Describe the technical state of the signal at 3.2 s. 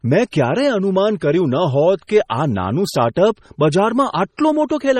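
Pre-echo runs from 3.14 to 3.16 s, a 20 ms smear of hiss just ahead of a sharp speech onset. The codec spread its coarse quantisation noise across the block, so noise meant for the loud attack leaks into the quiet before it. Unlike a click or dropout, it is diffuse noise arriving early, not a break in the waveform.

Heavy MP3 compression colours this moment too. Nothing is present above 15.9 kHz, and weak frequency components flicker in and out, giving a watery, swirly texture. That flickering sets it apart from a plain low-pass filter. It is likely the result of a 32 kbps MP3 encode.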